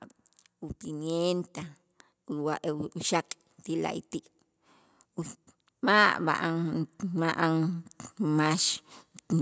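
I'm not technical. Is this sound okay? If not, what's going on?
No, not quite. From about 5.8 to 8.8 seconds there's automatic gain rising: the call's level control decided the speech was too quiet and slowly turned itself up, so the voice and the background noise swell louder together over those three seconds.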